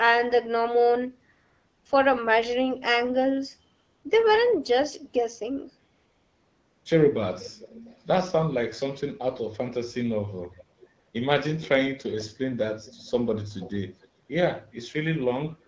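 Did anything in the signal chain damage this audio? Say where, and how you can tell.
Yes. AMR comfort noise comes from the codec's silence handling. At 1.33–1.85, 3.75–4.03, 5.95–6.85, 10.99–11.13 and 14.25–14.29 s, smooth synthetic noise replaces the real background.

There is also an echo leak in call processing. A faint copy of the sound returns about 450 ms late, about 20 to 35 dB down, at 7.43–8.02, 10.52–10.64, 10.80–10.88, 11.62–11.69, 12.85–13.11, 13.60–13.71 and 14.01–14.08 s. The likely cause is a loudspeaker echo canceller letting residue through.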